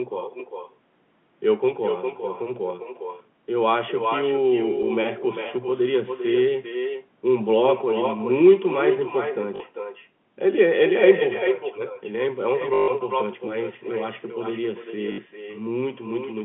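From start to finish the speech carries an echo with no canceller. Every phrase returns roughly 0.4 s later, only about 6 dB quieter and thinner. The far end is playing the call over a loudspeaker and its microphone sends it straight back, with nothing removing it. On a spectrogram each syllable's formant pattern reappears as a fainter duplicate shifted right by that gap. The waveform shows ghost envelopes trailing each burst of speech, filling the pauses.

Packet loss with the last packet repeated breaks in three times: 9.56 to 9.60 s (40 ms), 12.74 to 12.88 s (140 ms), and 15.12 to 15.18 s (60 ms). Each time the receiver replays its last good packet until fresh data arrives. The loops do not match the pitch period. The 140 ms run stutters robotically with a 50 Hz buzz, which fits 20 ms packets. In the waveform these stretches show identical repeating blocks with sharp discontinuities at the joins. 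The spectrogram shows frozen, horizontally smeared spectra, all inside the narrow telephone band that the G.711 link passes.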